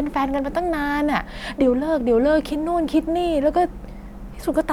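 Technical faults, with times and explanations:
No technical faults can be heard anywhere in the speech recording, so the signal reaches the listener intact with nothing to flag.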